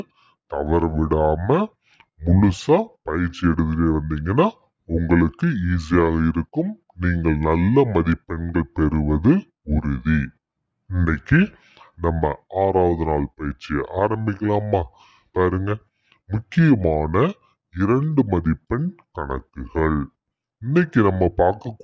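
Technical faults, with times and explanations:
Throughout, wrong sample rate: the audio is being played back at two thirds of the rate it was captured at, with no conversion, which fits 24 kHz material played at 16 kHz. Everything runs at 0.667 times normal speed and drops about 7 semitones, sounding low and sluggish.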